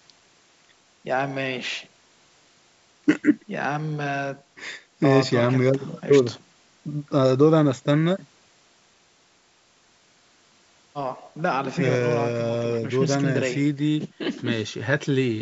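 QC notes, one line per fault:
Nothing stood out on listening to the speech, which comes through call microphone processing with the usual trimmed low bass and nothing above 8 kHz.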